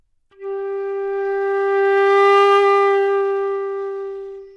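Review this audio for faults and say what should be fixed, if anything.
I hear no faults in this audio, and nothing needs to be fixed.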